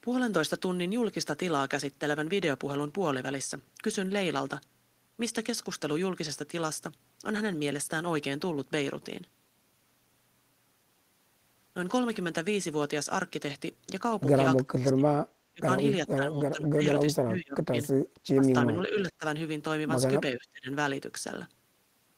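From 14.65 to 20.68 s the speech repeatedly sinks, by up to roughly 35 dB, at 14.65, 15.52, 16.06, 17.04, 18.34 and 20.32 s. This is likely speech suppressed in double talk, an echo canceller ducking the talker during crosstalk. Unlike network dropouts, the cuts are partial, uneven gain dips.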